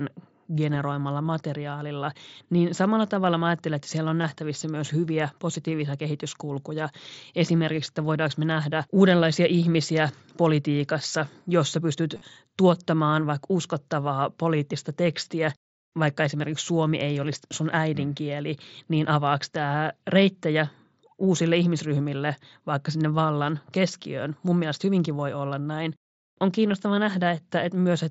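Concealed Bluetooth headset packet loss at 4.21 to 4.24 s and 12.15 to 12.22 s: lost headset packets were patched by repeating recent waveform, giving brief buzzy fills and a slight warble where real sound resumes.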